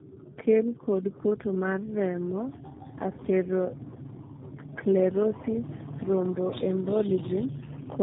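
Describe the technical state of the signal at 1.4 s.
At 1.4 s the speech carries tandem speech coding, which runs through the whole clip. The sound points to three low-rate speech coders in succession, consistent with GSM full rate followed by G.729A twice, each re-encoding the previous one's degraded output. The result is rough, muffled and warbly. On a spectrogram, energy stops dead near 3.8 kHz, and the harmonics look smeared and unsteady. The waveform appears coarse rather than cleanly periodic.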